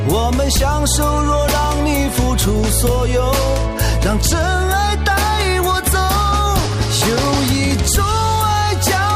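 No technical faults can be heard anywhere in the clip. Nothing in the audio points to a problem in how it was captured, processed or delivered.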